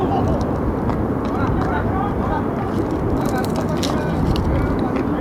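Nothing in the signal points to a technical fault, with no audible problem in how the audio was recorded, processed or transmitted.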